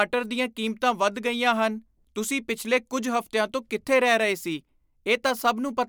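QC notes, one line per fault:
No technical faults are audible: the speech signal holds a steady level and continuous playback across the whole recording.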